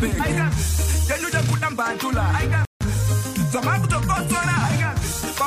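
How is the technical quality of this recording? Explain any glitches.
There is one glitch, a rebuffering stall from 2.65 to 2.81 s. The sound drops abruptly into silence for about 158 ms, then picks up exactly where it broke off, with nothing skipped or repeated. The gap comes from the player running out of downloaded audio and pausing until more data arrived. No material is lost, but the pause adds 158 ms to the playback and interrupts the flow at that point.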